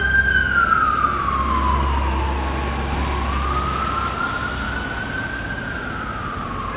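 The sound carries no faults, arriving through a working call path whose narrowband coding leaves nothing above 4 kHz, which fits G.711 mu-law at 64 kbps.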